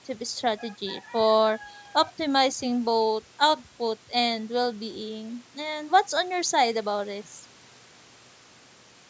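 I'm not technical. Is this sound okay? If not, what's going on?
Yes, nothing's wrong with this speech recording; it just has the slightly thin sound of audio picked up through a phone or video call microphone, which trims off the deepest bass and anything above 8 kHz, and that's completely normal.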